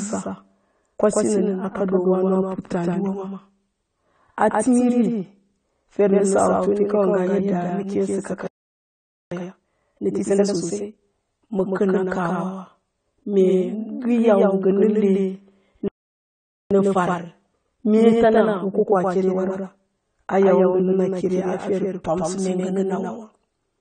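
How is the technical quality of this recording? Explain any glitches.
The technical quality is poor. The speech is doubled and dulled throughout, and it cuts out twice, each time followed by a hurried stretch.

Doubled audio track, throughout: a full-band second copy of the speech trails the original by around 150 ms, about 5 dB quieter, with no decay or room colour. This is likely a second capture path running behind the first. On a waveform, each syllable onset repeats as a smaller echo of itself; on a spectrogram, every burst appears twice.

AAC compression, throughout: the speech sounds dull and smeared, with fizzy, warbling sibilants. This fits AAC-LC at a low bitrate around 32 kbps, which likely discards fine spectral detail to save data. A spectrogram shows a hard ceiling at 9 kHz, with holes and blotchy patches below it.

Playback stall, at 8.47–9.31 s and 15.88–16.71 s: the sound stops abruptly in mid-flow for about 0.85 s and then 0.83 s. 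The likely cause is a player running out of data. The waveform drops to a flat line, and the spectrogram shows a blank vertical band.

Time-compressed catch-up, at 9.31–10.99 s and 16.71–19.71 s: the player trims its backlog by splicing out small pieces, running at 1.5× and then 1.15×. The speech is hurried but keeps its pitch. Syllables look squeezed closer together, with small discontinuities at the cross-fades.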